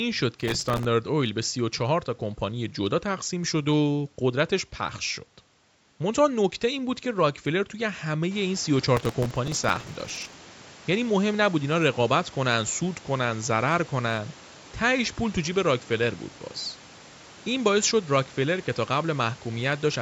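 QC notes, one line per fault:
0.41–0.85 s and 8.97–10.34 s, processor overload crackle: the processor repeatedly failed to fill its very short audio buffers on time, and each miss replayed a sliver of old audio with hard edges. Dozens of these in a row produce a gritty tearing over the speech, longer in the second burst.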